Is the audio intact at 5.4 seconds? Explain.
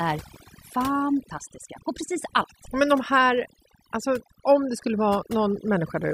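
No, overdone noise removal runs through the whole clip, so at 5.4 s the background drops to twinkly near-silence.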